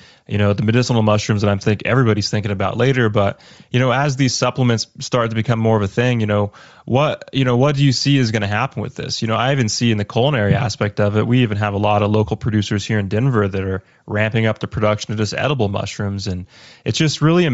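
Throughout the speech, the upper range sounds breathy and grainy. This is likely Bluetooth LC3 compression, which fits a 32 kbps stream filling discarded treble with noise.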